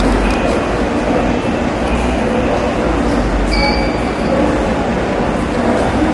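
Everyday sound runs through the whole clip with plainly audible low-delay AAC compression, likely from AAC-ELD at a rate that fits around 32 kbps. Its short analysis frames resolve tonal detail poorly, so the sound turns rough and grainy, with noise filling gaps that should be clean. On a spectrogram, energy stops abruptly at 11.5 kHz with nothing above, and the region below shows smeared, blocky texture where fine harmonic lines should appear.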